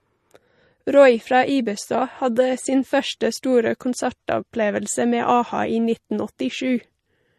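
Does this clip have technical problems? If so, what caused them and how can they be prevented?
Yes. The speech carries plainly audible MP3 compression damage throughout, likely from encoding at a low bitrate, which fits about 40 kbps. The treble is cut off with nothing above 13 kHz, and weak frequency lines flicker between frames, giving a watery, swirly texture and metallic chirps on s sounds. To prevent this, encode at 128 kbps or higher, or keep an uncompressed master.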